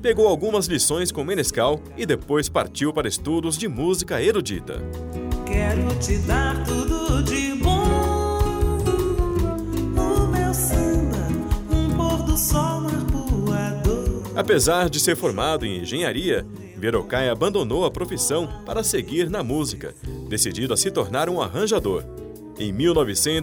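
Listening through the clip, nothing stood out as a technical fault at any point.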